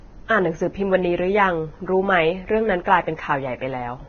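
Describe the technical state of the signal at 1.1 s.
At 1.1 s the speech carries heavy Vorbis compression damage, present across the whole clip and likely from a low-bitrate encode, near 17 kbps. Treble is coarsely quantised into hiss-like grain, roughening tones. A spectrogram shows a flat ceiling at 6.5 kHz with blotchy upper bands.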